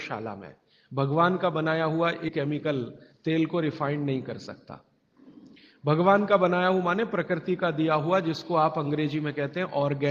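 At 2.28 s the playback path discarded a block of audio, about a third of a second of it, either lost in transit or thrown out by an overfull jitter buffer while newer material was already queued. This skip ahead leaves no filler: the sound on either side of the missing stretch is butted straight together, so the audio lurches forward abruptly and the delay drops by roughly the same third of a second.

From 2.39 s to 3.13 s the receiver was still holding more buffered audio than its target, and it trimmed the excess by cutting out many tiny fragments, each a pitch period or a few long, one after another, about 70 ms in total. This jitter buffer speed-up makes that stretch play roughly 10 percent fast while the pitch stays unchanged, so the sound seems briefly rushed before settling back to its normal pace.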